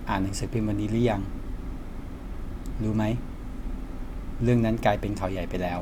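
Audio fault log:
No faults heard anywhere in this speech recording.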